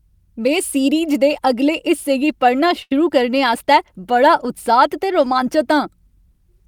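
At 2.82 s, between "अगले हिस्से गी पढ़ना" and "करने आस्तै बड़ा", a short stall from a late packet holds the sound for 84 ms, a smeared horizontal band on the spectrogram, before the speech resumes intact.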